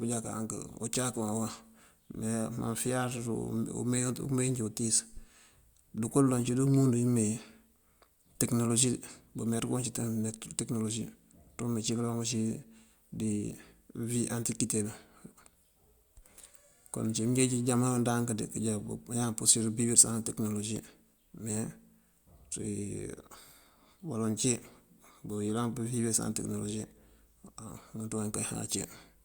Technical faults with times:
none

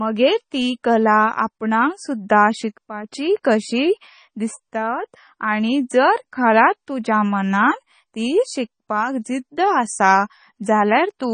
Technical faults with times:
0.00-11.33 MP3 compression
3.43 pre-echo

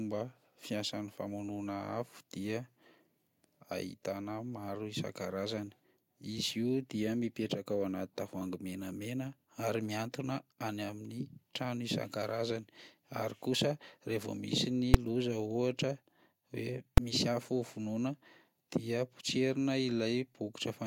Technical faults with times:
14.94 invalid numbers at full scale
16.98 invalid numbers at full scale

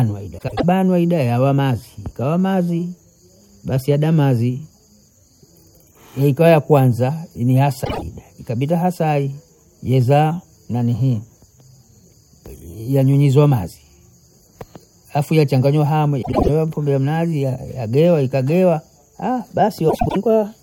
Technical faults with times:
0.38-0.64 frames out of order
7.84-8.02 frames out of order
16.22-16.49 frames out of order
19.89-20.16 frames out of order

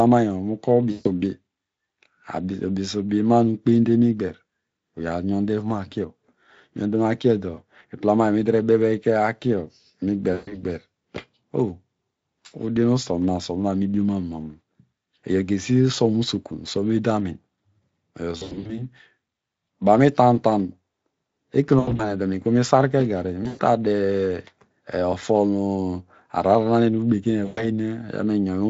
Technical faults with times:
0.91-1.08 VoIP packet loss concealed by the speech codec
10.33-10.66 VoIP packet loss concealed by the speech codec
18.37-18.82 VoIP packet loss concealed by the speech codec
21.79-22.12 VoIP packet loss concealed by the speech codec
23.43-23.62 VoIP packet loss concealed by the speech codec
27.45-27.69 VoIP packet loss concealed by the speech codec

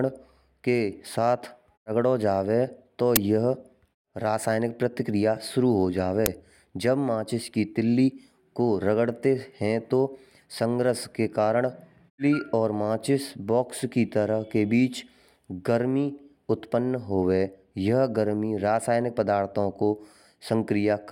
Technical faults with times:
3.16 uninitialised buffer
6.26 uninitialised buffer

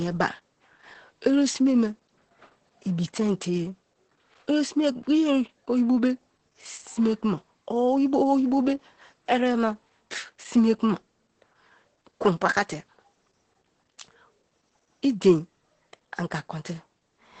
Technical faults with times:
0.00-17.40 Opus voice compression

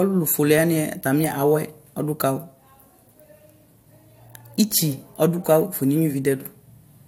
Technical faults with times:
none

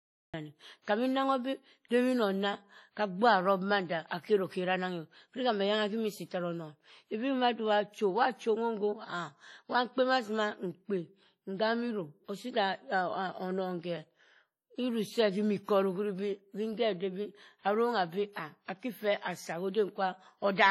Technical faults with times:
0.00-20.70 WMA compression
0.00-0.34 cut-off start
0.82-0.87 pre-echo

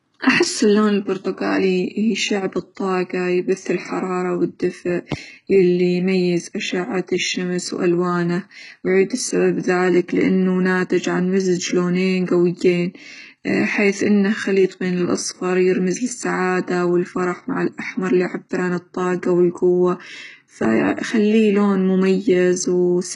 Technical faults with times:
0.00-23.16 HE-AAC compression
12.26 pre-echo

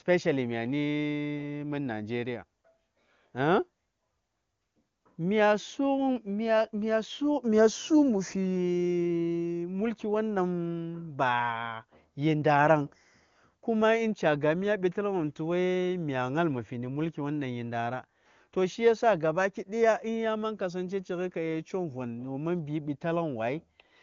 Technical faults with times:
none

